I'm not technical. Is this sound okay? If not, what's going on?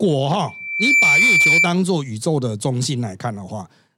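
No. From 0.48 to 1.74 s there's loudspeaker feedback squeal: the microphone is picking up its own speaker, and a shrill 2.3 kHz whistle swells up over about half a second until it's louder than the speech, then stops.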